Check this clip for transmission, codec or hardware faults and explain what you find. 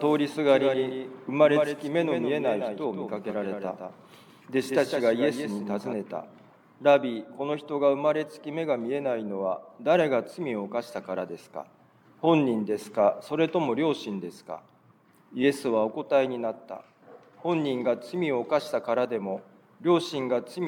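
One fault stands out: a doubled audio track from 0.49 to 5.93 s. A second, full-band copy of the sound trails the original by about 150 ms at roughly 5 dB lower, likely from a slower capture path or two misaligned edit copies. Unlike echo or reverb, it has a single repeat with no decay or room colour, and it cuts in and out abruptly.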